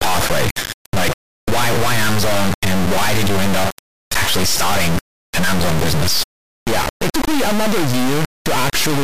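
A speech recording that, from start to finish, plays as a brutally loud, buzzing square wave that cuts to dead silence in the quietest moments. This is integer read as float: 32-bit integer samples were interpreted as 32-bit float, so each value lands either near zero or far beyond full scale. Ordinary overload clipping flattens the peaks of an otherwise recognisable waveform. Here, nothing of the original signal shape survives, only snapping between silence and the limits.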